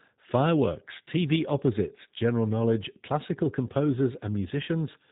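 From start to finish the speech carries G.729 codec damage, plainly audible. The voice is rebuilt from a vocal tract filter, a pitch predictor and a few pulses per frame rather than sent as a waveform, so it sounds slightly rough and synthetic, with nothing above 4 kHz. That thin, buzzy texture fits an 8 kbit/s G.729A stream. Simple low-pass filtering or G.711 would remove the top end without this synthetic graininess.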